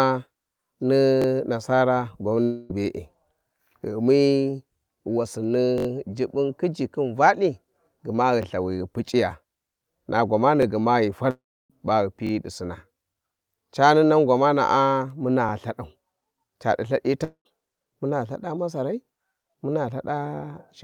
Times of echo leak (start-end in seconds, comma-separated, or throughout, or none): none